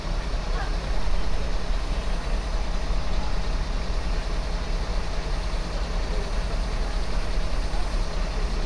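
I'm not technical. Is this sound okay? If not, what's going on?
Yes, this sound is okay, and nothing is going on with it that needs fixing.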